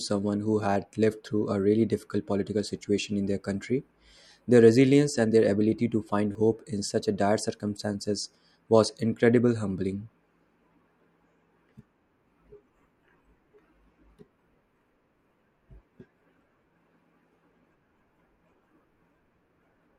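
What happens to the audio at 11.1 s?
Nothing goes wrong at 11.1 s; the speech runs through that moment intact, with no dropout, click, distortion or other fault.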